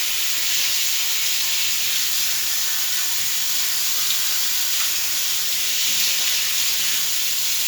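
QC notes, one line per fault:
No faults found. Nothing in the audio calls for a note.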